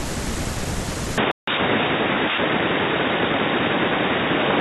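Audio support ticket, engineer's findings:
Input likely switched to a poorer device at 1.18 s, holding to end: band now stops near 3.8 kHz, speech turns dull and boxy, level shifts about 5 dB, no gap.

Bluetooth stall likely, 1.31 to 1.49 s: headphone buffer ran dry awaiting resent packets, audio drops to silence for 161 ms, then resumes.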